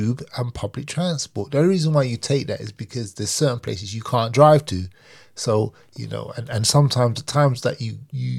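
At 3.68 s and again at 6.53 s the speech jumps forward, likely a dropped buffer (overrun), losing roughly 15 ms and 10 ms. The waveform shows a sudden discontinuity with no gap, and the spectrogram a thin vertical broadband line.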